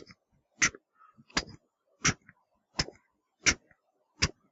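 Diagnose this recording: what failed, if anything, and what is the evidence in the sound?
Noise suppressor applied to music or sounds, throughout the clip, at the call-processing stage. A suppressor tuned for speech is treating the steadier parts of these everyday sounds as background noise. Sharp onsets pass, but sustained portions and decaying tails are pulled down by roughly 5 dB and then released, so the level pumps and the ambience thins between events. The call path's 8 kHz bandwidth is audible as a dull top end, which is expected for the call path.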